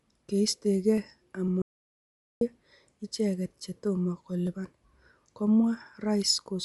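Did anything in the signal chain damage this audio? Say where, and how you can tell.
Yes. At the codec stage, the speech has a grainy, breathy edge throughout and nothing above 11.5 kHz, which fits Bluetooth LC3 compression at roughly 48 kbps, likely.

At the driver or buffer stage, periodic USB or driver dropouts cause ticks every 0.5 s from 0.48 to 6.46 s. Each skips roughly half a millisecond of audio.

At the input, an audio dropout to silence runs from 1.62 to 2.41 s. Those 0.79 s are silent with no room tone, likely from a lost input link.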